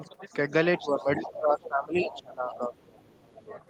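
From 0.77 to 1.38 s the other side's voice leaks through, about 15 dB under the speech, with scraps at 1.63–1.68, 2.17–2.25 and 2.50–2.55 s and a faint tail from 2.78 to 3.63 s. The likely cause is residual echo the canceller missed. Overlapping that, from 0.79 to 2.75 s, the talker's speech is suppressed in double talk, dipping by up to about 15 dB, likely because the canceller pulled both voices down together. There's a shorter dip of about 10 dB from 3.35 to 3.50 s.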